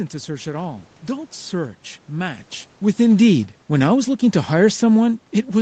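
Speech, carried over a call path with nothing above 8 kHz. From 3.0 s to the end, automatic gain falling sets in: the gain control judged the input too loud or its background noise too strong and steadily lowers its gain, so the speech and the room noise sink together.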